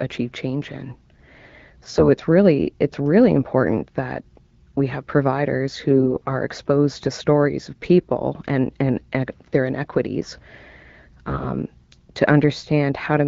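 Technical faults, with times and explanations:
1.91–2.08 s, 5.90–6.30 s and 11.27–11.49 s: AMR bit errors. The sound turns hoarse, scratchy and gargly just before "it's really it's really", between "that we have providers" and "exposed to stories of", and again near the end. Pitch and level roughly hold. On a weak link some 5 to 10 percent of the less protected bits arrived flipped. The excitation pulses land wrongly, and fine pitch, gain and spectral values drift. The longest burst fits about twenty 20 ms frames. Around these bursts the wideband AMR-WB codec at 12.65 kbit/s leaves only light coding damage.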